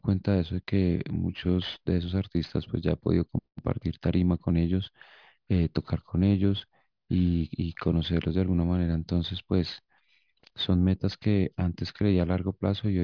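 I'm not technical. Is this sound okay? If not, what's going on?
No. Throughout the speech there is aliasing: the audio's sample rate was lowered, which fits a drop to about 11 kHz, without first removing sounds above 5.5 kHz. Those high sounds fold back as false tones, so hissy consonants turn gritty and metallic.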